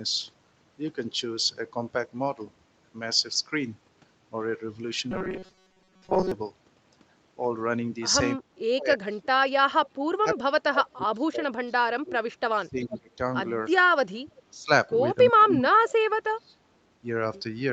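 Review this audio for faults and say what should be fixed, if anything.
Robotic sound from repeated short buffers, 5.12 to 6.32 s: a rigid metallic buzz at 188 Hz covers much of this stretch. The likely cause is audio arriving late, so the receiver loops a roughly 5 ms buffer. Stabilise packet delivery and size the jitter buffer to absorb the delay.

Speech suppressed in double talk, 8.36 to 13.1 s, 14.23 to 14.7 s and 15.3 to 16.61 s: the speech dips by up to about 35 dB in places. This is likely the echo canceller attenuating this talker while the far side speaks. Tune the double-talk detector so that near-end speech is not treated as echo.

Echo leak at 9.86 to 10.02 s and 12.84 to 12.98 s: delayed copies arrive 362 and 367 ms later, about 15 and 20 dB down. These are likely loudspeaker echo that the far end's canceller did not remove. Improve the far-end canceller's convergence, or have that side use a headset.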